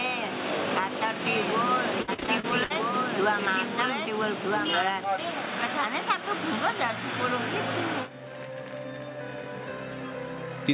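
From 1.26 to 5.04 s a second copy of the sound, about 5 dB quieter, trails the original by about a second and a half, dry and full-band, cutting in and out abruptly. This doubled audio track is likely caused by a slower second capture path mixing in late.

Between 2.02 and 2.72 s, inside that doubled stretch, the sound turns choppy with pieces missing, with roughly a third of the span patched over by smeared continuations and no single hole longer than 60 ms. This is repeated packet loss (robotic sound), where lost or late packets keep getting concealed by stretching the last audio. The band stops at 4 kHz, which fits a G.711 call path.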